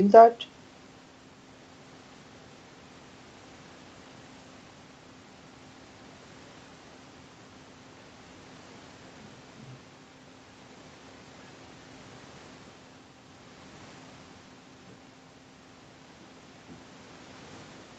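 No technical faults can be heard in this speech.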